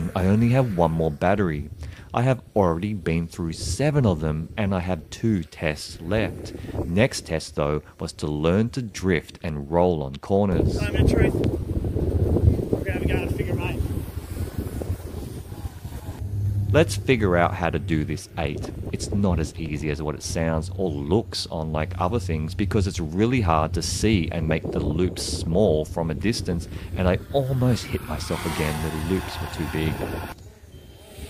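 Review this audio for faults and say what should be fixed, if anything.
Two loud pops, at 11.44–11.46 s and 14.82–14.84 s, each a single sharp transient about 10 dB above the audio, likely from a voltage step such as static or a switch. Prevent recurrence by grounding the equipment and avoiding switching or plugging during recording.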